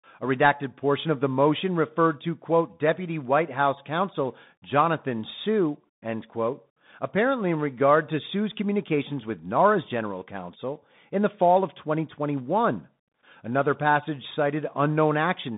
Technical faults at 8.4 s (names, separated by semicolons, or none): Bluetooth CVSD headset codec